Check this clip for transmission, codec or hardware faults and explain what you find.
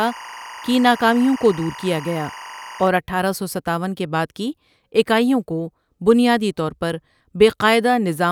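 One fault is present: timecode bleed over the opening of the speech, from 0.00 to 2.88 s. Behind the talker runs a steady, chirping warble, sitting roughly 20 dB under the speech and flipping between pitches near 1 kHz and 2 kHz. The warble comes from linear timecode running at 24 frames per second on an adjacent track or cable, whose square-wave signal has coupled into the audio path. The bleed stops after 2.88 s.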